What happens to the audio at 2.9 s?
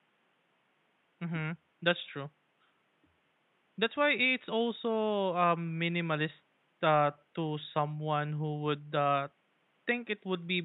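Nothing goes wrong at 2.9 s; the speech plays through intact there, with only the quiet room background sitting about 42 dB below it.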